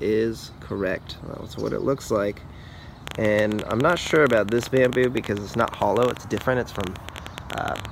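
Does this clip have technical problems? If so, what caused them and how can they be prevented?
Yes. From 3.08 s to 7.86 s a train of clicks sits on top of the audio: roughly 70 near-identical pulses at an uneven pace averaging 13.4 per second, peaking around 15 dB above the signal and audible in the gaps as well. The likely cause is interference from nearby equipment or a faulty connection or power supply injecting repeated pulses into the signal path. To prevent it, keep other electronics away from the recording chain, use shielded cables, and make sure the interface has a stable connection and driver.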